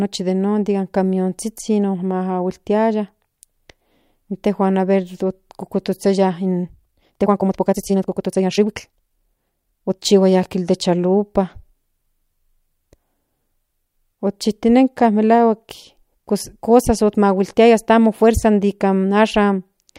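From 6.41 s to 9.99 s the speech runs through a time-stretched section, played at about 1.54 times its normal pace while the pitch holds steady. The pace jumps abruptly at the start and drops back just before "dende chalupa". The likely cause is software squeezing the passage to fit a shorter slot by discarding short slices of the waveform, which leaves the delivery rushed.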